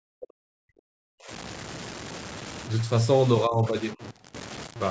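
Speech throughout carries a harsh grain that follows the voice, with noise only about 15 dB below it, likely from low bit depth without dither, consistent with truncation to roughly 5 bits. The voice also dips or drops out at 0.00–0.74 s and 1.01–1.31 s, falling by around 40 dB, and more shallowly, by about 10–15 dB, at 3.47–3.76 s and 3.94–4.02 s, likely speech suppressed in double talk by an echo canceller.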